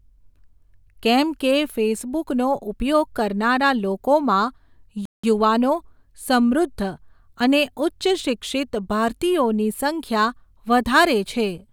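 At 5.05 s the speech cuts out dead for about 181 ms, until 5.24 s, then carries on: a classic playback stall. The likely cause is the player running dry of buffered data, or its audio thread getting blocked, so output simply went silent until it caught up.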